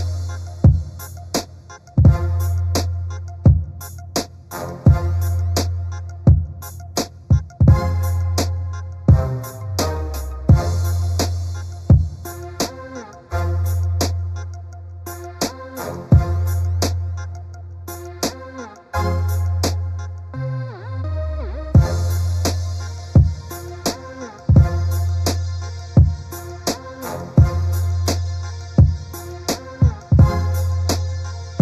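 Hollow, phasey sound throughout, with a fixed notch near 3 kHz: channel delay (comb filtering), one channel lagging a fraction of a millisecond before mono summing.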